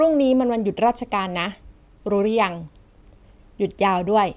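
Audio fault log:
No faults are audible anywhere in this speech recording.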